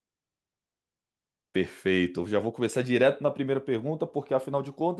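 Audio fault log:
Nothing stood out on listening to this speech recording.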